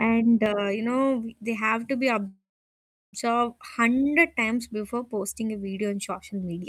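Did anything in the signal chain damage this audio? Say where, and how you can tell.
Yes. From 0.46 s to the end, pre-emphasis left on gives the speech a thin, bright, sibilant character. The top end sits about 11 dB above 1 kHz at 10 kHz, a rising shelf that fits the J.17 curve. This is a transmission or decode stage fault: the treble boost applied before the link was never undone by the matching de-emphasis, so the recorded balance is tilted upward throughout.

A call audio freeze runs from 2.27 s to 3.15 s, about 0.86 s in all. The last sound carries on as a fading buzz or hiss, then drops to near silence for roughly 0.7 s. Speech then resumes exactly where it stopped, with nothing lost, so everything after it lands about 0.86 s late. The likely cause is delayed packets on the network draining the receiver's jitter buffer, which filled the wait instead of skipping ahead.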